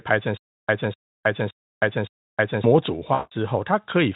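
From 0.37 to 2.64 s the audio has a stutter with silent gaps. A 251 ms fragment plays, then drops into 316 ms of digital silence, and the cycle repeats four times at a steady 567 ms period. The likely cause is a player or stream that stalled and, on each retry, replayed its last buffered chunk before running dry. The waveform shows identical blocks separated by flat lines, and the spectrogram shows a repeating pattern with clean vertical black bands between.

At 3.13 s, lasting to 3.33 s, there is VoIP packet loss concealed by the speech codec. The decoder, Speex here at around 18 kbps, had nothing for 180 ms, which fits nine 20 ms frames. It extrapolated from the last pitch and filter state while lowering the gain, so the sound smears into a buzzy tone or coloured noise that fades. A spectrogram shows a frozen spectrum that loses energy, and the waveform shows a shrinking envelope.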